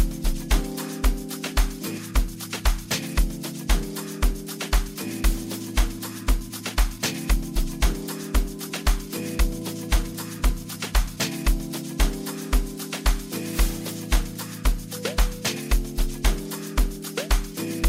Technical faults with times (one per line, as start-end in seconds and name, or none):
1.97-1.99 skip ahead
2.11-3.66 jitter buffer speed-up
4.23-4.96 jitter buffer speed-up
5.83-7.93 jitter buffer speed-up
9.95-11.17 jitter buffer speed-up